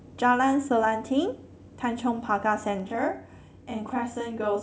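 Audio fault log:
2.80–4.62 s, channel delay (doubling): from 2.80 s to the end of the speech, one channel arrives about 32 ms behind the other, which fits a 512-sample buffer at 16 kHz. When the two channels are folded to mono, the late copy sits at full level just after the original. At that spacing the ear hears it as a distinct doubled attack, close to a single slap echo, on every syllable rather than as tonal colouration.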